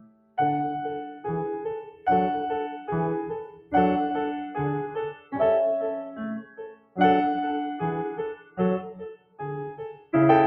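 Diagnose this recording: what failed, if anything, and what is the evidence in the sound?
Call processing failed: a speech noise suppressor was left on this music, treating held tones and tails as noise. The spectrogram shows sustained partials fading and the waveform envelope pumping by around 15 dB.

Sound cut by the noise suppressor hits at 0.00–0.38, 1.88–2.07, 3.47–3.74, 4.89–5.34, 6.40–6.99, 8.34–8.59, 8.82–9.42 and 9.71–10.13 s. It drops about 10 to 20 dB, and the waveform and spectrogram show dark gaps where decays are chopped.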